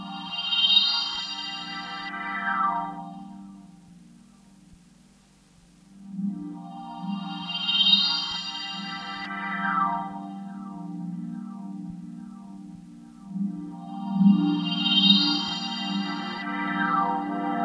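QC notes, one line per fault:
Nothing to flag on this one, as no faults turned up anywhere in these sounds.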